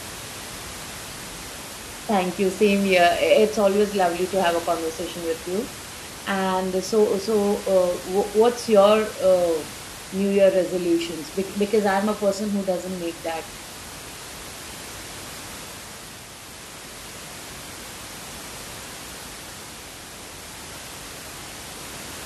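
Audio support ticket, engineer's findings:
Nothing wrong turned up on the system side here; the only thing in the background is the room itself, sitting about 15 dB under the speech, and that's just part of the recording.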